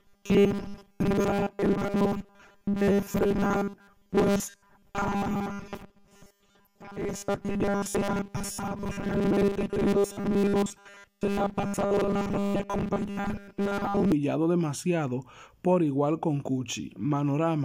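From 0.01 s to 14.12 s the audio carries a rigid, metallic buzz pitched at 200 Hz: robotic sound from repeated short buffers. The likely cause is fresh audio arriving too seldom, so playback loops a snippet of about 5 ms to fill the gaps, for roughly seven tenths of the time, while the real material in between is dropped. Unlike flanging or comb filtering, the buzz holds one fixed pitch whatever the sound does, and parts of the underlying audio are simply missing.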